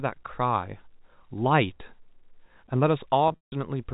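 From 3.28 to 3.52 s, packets were dropped, losing about 200 ms of audio over 240 ms, and packet loss with pitch repetition filled the gaps. The longest run, 160 ms, outlasts the repeated pitch cycle's fade, so the sound briefly buzzes, then drops to silence before cross-fading back. The G.711 telephone band stays intact.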